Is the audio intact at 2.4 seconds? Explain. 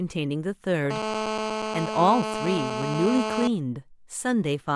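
No. At 2.4 seconds the speech sits under a GSM phone buzz that runs from 0.91 to 3.48 s. A nearby 2G phone on a call transmits in bursts about 217 times a second. The audio circuit rectifies those radio pulses into the signal. The result is a hard, raspy buzz at 217 Hz, rich in harmonics. It holds steady across the span. It stays only about 4 dB below the speech, so it is plainly audible.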